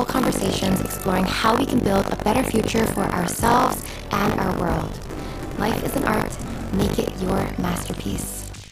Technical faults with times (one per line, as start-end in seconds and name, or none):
0.00-8.72 buffer tearing